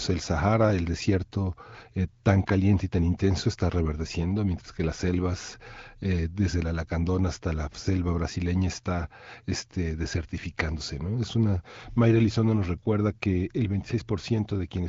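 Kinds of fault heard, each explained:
No audible faults are present in this speech recording.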